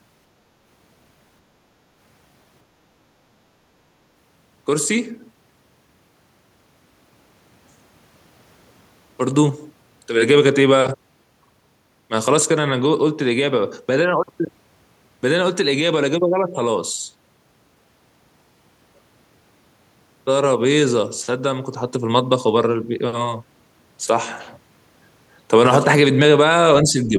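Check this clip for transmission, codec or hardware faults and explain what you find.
One fault stands out, right at the end of the clip. From 26.83 to 27.18 s the speech sags by roughly 5 dB, over about a third of a second. This is speech suppressed in double talk, likely from an echo canceller that could not separate this talker from the overlapping far-end echo and pulled this talker down as well.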